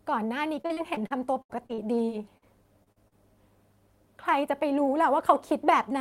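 Speech clip with repeated packet loss (robotic sound) from 0.61 to 2.44 s and again 2.84 to 3.16 s: frequent gaps, up to 70 ms, patched by stretching prior sound.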